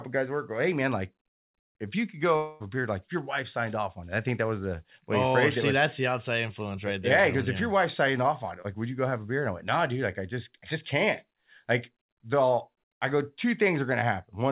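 A speech recording carried over a call path with a band limit at 4 kHz, consistent with G.711 mu-law coding, it has two network faults. From 2.36 to 2.62 s, about 240 ms of audio likely never arrived, a long network dropout. The receiver covered the whole gap by extending the last sound it had, so there is no silence, only a fading synthetic buzz or hiss in place of the real speech. The audio resumes at 2.62 s without the lost portion. From 8.62 to 8.66 s there is a short concealed packet loss: about 20 ms of audio missed the decoder. The receiver patched the hole by continuing the preceding sound, carrying its pitch through if it was voiced or filling with shaped noise if not, and then blended back into the real signal. This leaves a brief smear or wobble where a short sound may be lost.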